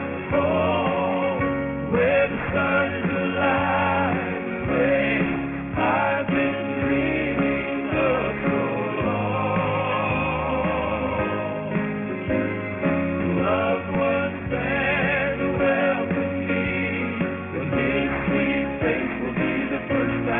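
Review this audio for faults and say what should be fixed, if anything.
Aliasing throughout: downsampling without a low-pass filter, consistent with a 6 kHz rate, folds content above 3 kHz back as gritty, metallic tones about 10 dB down.

To prevent it, low-pass filter below half the target rate before resampling, or use a proper resampler that does so.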